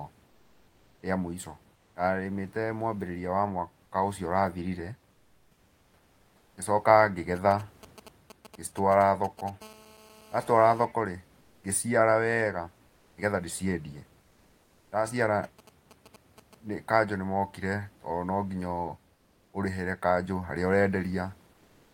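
Comfort noise in place of the background appears first at 1.75 to 1.95 s, a 200 ms stretch where the room noise, normally sitting about 36 dB below the speech, gives way to a smooth, detail-free hiss about 2 dB quieter. This is likely discontinuous transmission in an Opus link: the sender goes quiet between phrases and the receiver synthesises a rough imitation of the background. A longer patch follows at 5.11 to 6.57 s, 1.46 s long and about 5 dB down.

GSM signalling bursts enter at 7.36 to 9.50 s: a galloping run of short buzzy pulses, roughly 20 dB below the speech. A nearby 2G handset is sending brief groups of radio bursts, and the audio circuitry rectifies them into this stuttering dit-dit-dit pattern built on a 217 Hz repetition.

GSM phone buzz takes over at 9.62 to 10.85 s. A handset is now transmitting in 217 bursts per second, so the rectified pulses become a steady, harsh, harmonic-rich rasp at 217 Hz, about 25 dB below the speech and unrelated to it.

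Comfort noise returns at 12.87 to 13.17 s (300 ms, about 3 dB quieter) and 14.21 to 14.91 s (700 ms, about 3 dB quieter), with the background again flattened into uniform hiss.

GSM signalling bursts recur at 15.44 to 16.55 s with the same buzzy, galloping texture, roughly 20 dB down.

The last comfort-noise fill, at 19.15 to 19.53 s, lasts 380 ms at the same level as the real background, so it stands out through its smoother, different tone.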